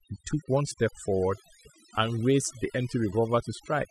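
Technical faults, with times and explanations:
Throughout, overdone noise removal: the denoiser was pushed too hard, muting bands near its noise estimate, so the background goes near-silent with twinkly specks.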